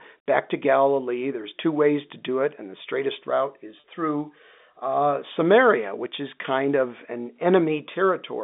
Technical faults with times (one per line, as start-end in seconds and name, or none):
3.80-3.82 packet loss with pitch repetition